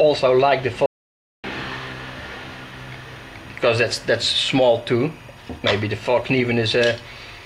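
From the very start and running the whole way through, a faint chirping warble sits behind the sound: timecode bleed. Linear timecode from a nearby track or cable has leaked into the audio path, and its square wave flips between two pitches near 1 kHz and 2 kHz, roughly 30 dB below the program. Unlike a steady whistle or hum, it never settles on one tone. It jitters in a regular pattern that fits 24-frame-per-second code.

At 0.86 s the audio drops out to silence, returning at 1.44 s, so about 0.58 s of material is missing. The cut is abrupt at both edges, and the gap holds silence with no room tone and no noise floor. That absence separates it from a noise gate or a quiet passage, which would leave some background behind. The likely cause is a momentary loss of the input signal, through a dropped connection or brief mute, while the recorder kept writing silence.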